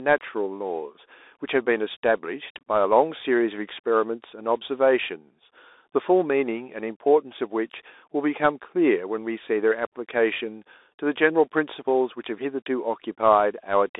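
From start to finish the speech runs through a Bluetooth CVSD headset codec, sounding like a 64 kbps stream. It's squeezed into a 300 Hz to 3.7 kHz phone band with nothing above 3.8 kHz. Each sample is a single up-or-down step, so sibilants come out scratchy over a grainy hiss.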